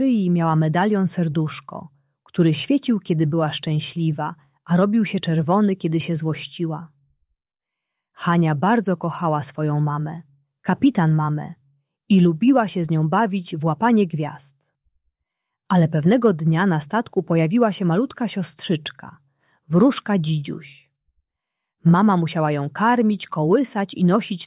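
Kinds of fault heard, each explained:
No fault of any kind can be heard here; nothing breaks, distorts or drops out anywhere in the audio.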